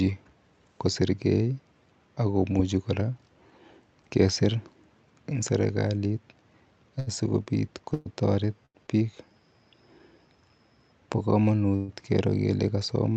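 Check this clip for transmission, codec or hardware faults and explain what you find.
The speech shows two kinds of transmission fault, both from packets arriving late.

Short stalls from a late packet occur at 6.99–7.09 s, 8.66–8.77 s and 8.87–8.90 s. Each time a packet missed its slot, the jitter buffer emptied, and the receiver stretched the last sound for about 75 ms, 90 ms and 15 ms before resuming. Nothing is lost, but a sound is briefly held with a slight buzz or dip.

Call audio freezes at 7.94–8.08 s and 11.76–11.90 s were likely caused by packets held up in transit long enough to drain the jitter buffer. The receiver filled about 118 ms and 122 ms by continuing the last sound as a fading buzz or hiss without reaching silence, then carried on from the same point, so a gap is inserted.

Through the call codec, the audio is band-limited to about 8 kHz.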